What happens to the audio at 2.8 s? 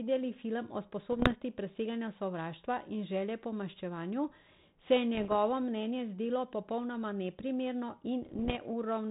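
Nothing goes wrong at 2.8 s: the speech carries straight through that moment with no dropout, click or distortion, and the 32 kbit/s G.726 ADPCM path it travels over leaves only its light, band-limited telephone colouring there.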